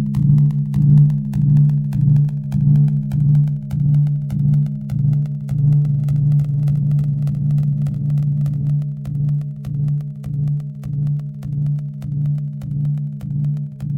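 Everyday sound where, from 5.85 to 8.67 s, a doubled audio track appears: a dry, full-band copy about a second late and a few dB quieter, starting and stopping abruptly, likely from a second, slower capture path.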